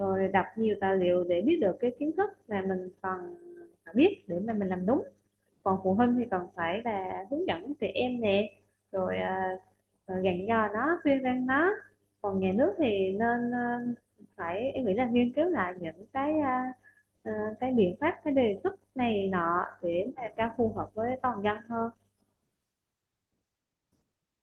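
No technical faults can be heard anywhere in this recording of speech; the signal stays intact and steady throughout.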